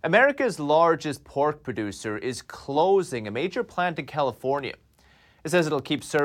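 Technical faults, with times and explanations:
4.59 to 6.19 s, periodic USB or driver dropouts: roughly fifteen tiny gaps of silence, each a small fraction of a millisecond, fall exactly every 0.1 s, heard as steady ticks. Unlike random crackle, the spacing never varies, as a background task repeatedly stalls the audio path.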